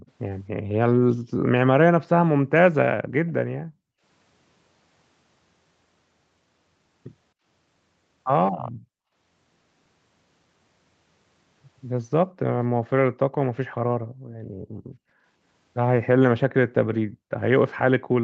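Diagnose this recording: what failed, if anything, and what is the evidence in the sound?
Right at the top, 0.0 to 0.11 s, there's a faint delayed copy of the speech trailing about 270 ms behind, very quiet, somewhere around 30 dB under the voice. That points to call processing: most likely an echo leak, where the far end's loudspeaker played the call, its microphone picked it up, and the echo canceller didn't fully subtract it before sending it back. It's brief, just a scrap of residue.

The room background also dips, and that's the echo canceller gating it, again a call-processing stage. The canceller clamps the microphone down hard while it thinks the loudspeaker is active, then releases. The first dip, 0.52 to 0.66 s, is shallow, about 7 dB. The rest go down roughly 40 dB: 3.03 to 4.02 s, 12.25 to 12.43 s, 13.68 to 14.59 s and 17.05 to 17.36 s. In those stretches the ambience just vanishes and then snaps back, against a band that tops out at 8 kHz.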